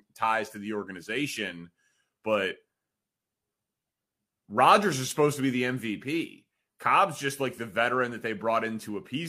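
No technical faults can be heard.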